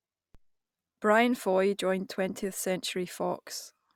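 At 0.35 s and again at 2.43 s the waveform's zero line jumps in a DC step of about -44 dBFS. This is the kind of offset shift a converter recalibrating or a biased input being switched in would produce. Each offset then drains away through a high-pass around 5 Hz rather than holding. The speech carries on unchanged, but each step comes through as a low thump.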